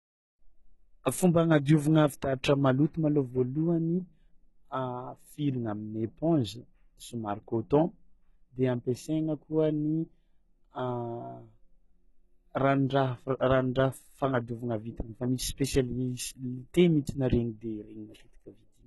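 Throughout the speech, the treble sounds rebuilt rather than recorded, likely from HE-AAC compression at around 16 kbps. The s sounds are gritty and metallic, and a spectrogram shows copied, smeared upper bands that stop abruptly at 11.8 kHz.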